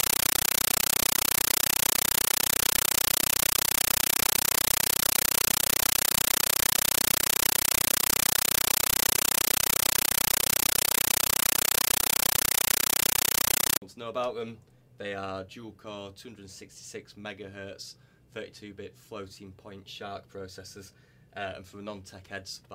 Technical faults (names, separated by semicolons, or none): compressed stream played as audio